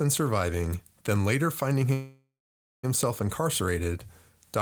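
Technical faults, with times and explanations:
1.93–2.85 s, call audio freeze: the speech halts and the last sound is stretched into a fading buzzy hiss, then true silence for about 0.5 s, before the speech resumes where it left off with nothing lost, now running about 0.9 s late. The likely cause is delayed packets draining the jitter buffer. On a spectrogram the final frame smears into horizontal streaks that fade to an empty gap. The waveform shows a decaying tail, then a flat line.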